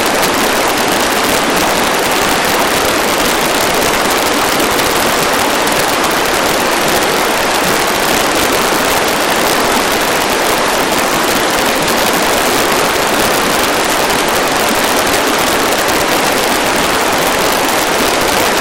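Violent, snapping cracks break out on the loudest moments across the whole clip, far harsher than the flattened buzz of ordinary clipping. This is integer overflow: the signal was pushed about 5 dB past the largest value the integer format can hold, and instead of being limited, each peak over that ceiling wrapped around to the opposite extreme. Only a small fraction of samples, under one percent, cross the limit, but every one jumps across the full range, producing those sharp cracks.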